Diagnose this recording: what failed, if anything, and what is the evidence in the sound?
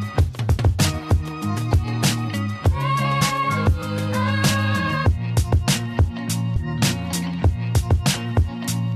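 Compressed frames skipped at 3.21 s and 6.55 s: at each point the audio jumps forward, losing roughly 70 ms and then roughly 100 ms, with a short smeared blip at the join instead of a hard click. That fits a codec frame of about 23 ms, so around three and then four whole frames went missing from the file or were rejected by the decoder as damaged. The overlap between neighbouring frames blurs each seam into that brief smear.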